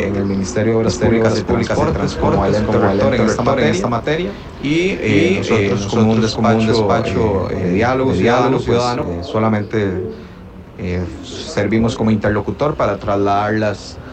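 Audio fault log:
0.87–9.03 s, doubled audio track: a second copy of the same signal, likely from a slower capture path or misaligned edit, is mixed in about half a second late at roughly equal level, giving a dry full-band repeat with no room tail that starts and stops abruptly.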